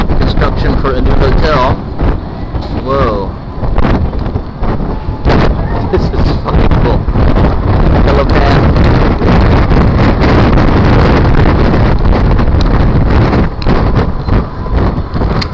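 No technical fault can be heard anywhere in this audio. It has passed through a call path whose band stops at 8 kHz, which fits a wideband codec such as G.722 at 64 kbps.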